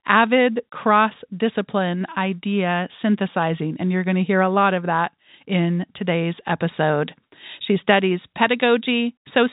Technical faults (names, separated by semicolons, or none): none